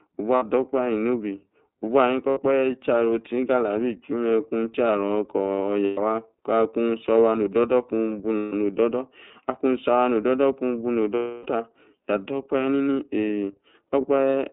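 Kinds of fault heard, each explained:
iLBC codec: Throughout, the speech has the narrowband sound of iLBC at 13.33 kbps, confined to roughly 200 Hz to 3.7 kHz. Each 30 ms frame's excitation is coded independently, leaving a plainly audible rough, slightly synthetic edge on the voice.
Lost iLBC frames: Dropouts at 0.35, 2.31, 5.84, 8.37, 11.16 and 14.01 s, lasting 30 to 300 ms. The decoder fills each by repeating the last pitch cycle blended with noise, giving a held, buzzy vowel that fades over the longest gap and recovers almost at once.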